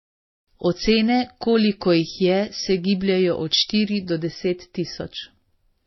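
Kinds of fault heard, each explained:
Transcoding between lossy codecs: Nothing reaches above 5.8 kHz, and two kinds of coding damage are layered throughout, heard together. This is likely a low-rate MP3 re-encoded to HE-AAC, the second encoder spending its bits on the first one's errors.
Pre-emphasis left on: From 0.0 to 4.09 s the treble sits high, the boost curve reaching about 13 dB at 10 kHz relative to 1 kHz, fitting a 75 µs FM boost with no matching de-emphasis, so the speech sounds thin, bright and hissy with sharpened sibilants.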